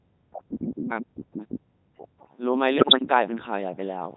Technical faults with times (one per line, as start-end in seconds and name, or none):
0.00-4.17 Codec 2 vocoder
2.78-3.02 bit errors on digital voice radio